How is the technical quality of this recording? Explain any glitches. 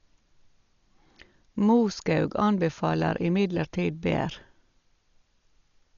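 Quality's pretty poor. The speech is heavily coded from start to finish, and it sounds like Dolby Digital compression. Across the whole clip there's nothing above 7 kHz, so the top end is just gone and the speech comes across dull and muffled. The likely cause is an AC-3 style encoder starved of bits, something around 40 kbps by the sound of it. At that rate it narrows the band and leaves many frequency lines with no real data, and the decoder fills those gaps with noise. That's the rough, fluttery grain you hear clinging to the voiced sounds.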